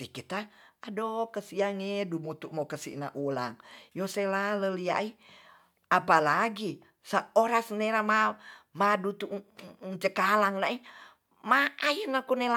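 Speech recording; no technical faults found.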